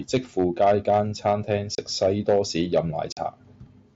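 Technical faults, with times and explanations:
Throughout: hard clipping. The speech is pushed about 4 dB past what a stage in the chain can pass, so the loudest peaks are sliced flat, roughly one percent of the signal. The flattened tops throw off high harmonics, heard as brief crackle riding on the strongest syllables, not a constant fuzz. That peak-only timing separates it from codec graininess, which follows loudness more evenly and stays below the 8 kHz ceiling of the wideband headset link.
1.75 to 1.78 s and 3.12 to 3.17 s: unconcealed Bluetooth headset packet loss. The speech drops out for about 30 ms and then about 45 ms, which fits four and six lost headset frames, and nothing fills the gaps. The holes open and close abruptly. Unlike clipping, these are gaps rather than added harshness, and they fall at two fixed moments instead of tracking every peak.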